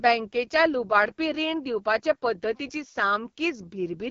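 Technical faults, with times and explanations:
Throughout: AMR wideband (HD Voice) codec at 8.85 kbit/s, one of its lowest rates, so the speech sounds rough and raspy, with nothing above about 7.3 kHz.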